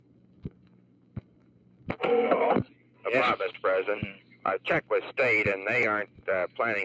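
A speech-tuned noise suppressor applied to music or sounds makes the level pump by around 10 dB throughout, as held material and tails get treated as noise while attacks pass. The sound cut by the noise suppressor sinks by about 11 dB from 0.0 to 1.88 s, 2.66 to 3.05 s, 4.15 to 4.44 s and 6.06 to 6.27 s. At 5.83 s a repeated buffer gives a tiny click-buzz: a 2.67 ms slice, which fits a 128-sample buffer, plays twice more with hard joins.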